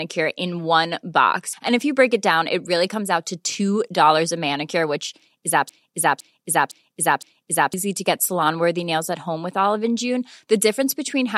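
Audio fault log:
5.69–7.74 s, broken-record loop: the speech suddenly locks onto a fragment about half a second long, 511 ms, and plays it four times back to back, identically each pass, like a needle stuck in a groove, before normal playback resumes. The likely cause is a stall somewhere in the playback or streaming chain that kept re-sending its last held fragment, so whatever speech belonged in those two seconds is gone.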